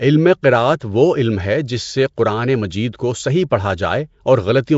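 From start to finish the speech carries a rough, hissy halo and a smeared, underwater colour. Nothing is heard above 7.7 kHz. The damage is plainly audible. This is likely Nellymoser compression, the old Flash microphone codec. It codes short blocks with a fixed, small bit budget, which fits a rate near 32 kbps. Bands too weak to earn bits are filled with noise, hence the hiss and blur.

At 3.50 s there is a brief pre-echo. A sharp onset sits late in a coded block. The noise sized for that loud moment spreads back over the quiet instant before it, about 12 ms earlier. A short hiss leads into the attack, and the attack itself sounds softened and smeared rather than crisp.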